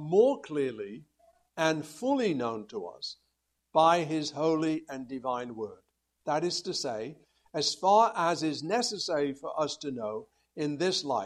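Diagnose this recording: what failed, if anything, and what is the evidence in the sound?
Nothing failed at any stage of the chain, and there is no evidence in the sound of a fault to diagnose.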